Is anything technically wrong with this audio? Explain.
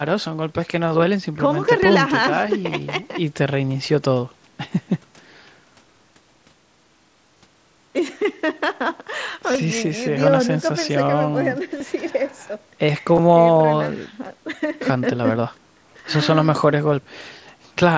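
Yes. Concealed Bluetooth headset packet loss occurs at 3.03 s, 7.38–7.42 s, 9.52–9.58 s, 11.78–11.80 s and 13.14–13.19 s. Packets between the headset and the phone were dropped, and the receiver filled each gap by repeating the best-matching recent stretch of waveform. The single 7.5 ms loss at 3.03 s is nearly hidden. The longer ones, up to 45 ms of loss spread over 75 ms at 13.14 s, leave a short buzzy tone held at full level, with a small warble as the real speech returns.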